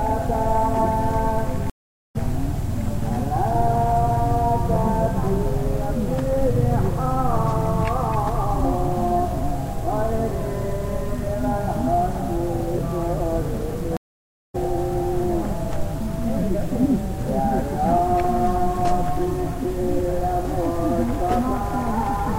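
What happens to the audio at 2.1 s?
That's a stream reconnect: the link drops, the sound goes silent from 1.70 to 2.16 s, then a fresh decoder picks up roughly 0.4 s further along.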